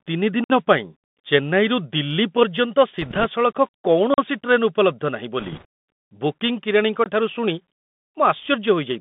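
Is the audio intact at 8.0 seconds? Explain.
No. At 8.0 s the speech runs through Bluetooth CVSD headset codec damage. Its one-bit coding keeps only about 150 Hz to 3.6 kHz, adding scratchy sibilants and granular hiss.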